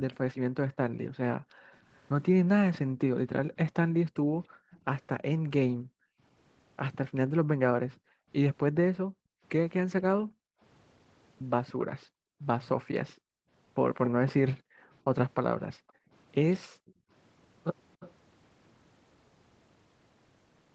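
A speech recording from a call, where the echo canceller repeatedly gated the background between 0.67 and 17.1 s, pulling the room sound down by as much as about 40 dB, roughly five seconds in total. A delayed copy of the speech also comes back, likely an echo leak from a loudspeaker-side echo canceller letting its microphone pickup through: a brief faint scrap at 4.72 to 4.79 s about 292 ms behind, then a louder, sustained trail from 11.66 to 18.13 s about 298 ms behind.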